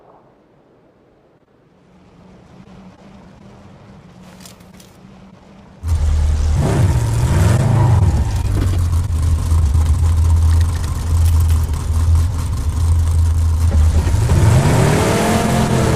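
At 9.23 s a doubled audio track begins abruptly and runs to the end: a full-band second copy sits roughly 200 ms behind, a few dB quieter, with no decay or room colour, likely from a slower second capture path mixed back in.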